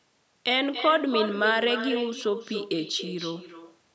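From start to finish the speech carries an echo with no canceller. The far end is playing the call through a loudspeaker, its microphone picks that sound back up, and nothing removes it before it returns. Each phrase is trailed, after a delay of roughly a third of a second, by a copy sitting about 8 dB below the original, quieter and thinner. The band-limited call processing caps everything at 8 kHz.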